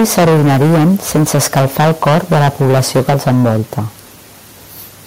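From 0.0 to 3.79 s the speech sounds harsh and crackly, with the loudest syllables flattened; likely microphone overload, driven about 16 dB past full scale, clipping roughly a fifth of samples.

At 3.1 s the speech and background drop suddenly by about 3 dB, likely the microphone volume stepped down by call software reacting to the clipping.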